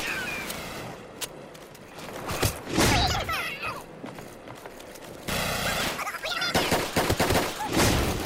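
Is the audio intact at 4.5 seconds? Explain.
No, at 4.5 seconds the audio read two samples at a time (double speed) fault runs throughout. Sample pairs are taken as single frames, so playback is twice as fast and an octave higher.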